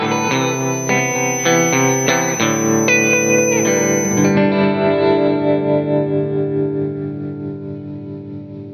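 From the start to 4.39 s, a thin feedback whistle near 6.1 kHz sits about 10 dB under the music, likely a speaker-to-mic loop hovering just short of runaway.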